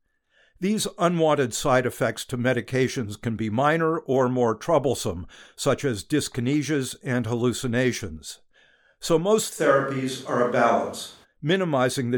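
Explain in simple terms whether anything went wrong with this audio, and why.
From 9.6 to 11.23 seconds, the speech suddenly sounds roomy and hollow, as if the person had stepped away across the room, with thinner bass and faint background noise. The loudness stays about the same. At 11.23 the close, full sound snaps back. This is a switch to a distant microphone: the nearby microphone's signal most likely dropped out, and a microphone farther away briefly filled in.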